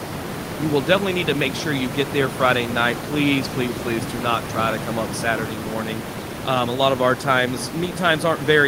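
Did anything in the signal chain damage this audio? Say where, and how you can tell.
No, nothing in the chain has damaged this speech recording; the only thing beneath it is the room's own background noise, sitting about 9 dB below the speech, which belongs to the acoustic space at the microphone rather than to any stage of the system.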